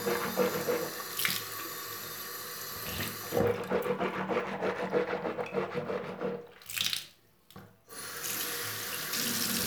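Nothing in this recording of sounds stood out as a technical problem on listening.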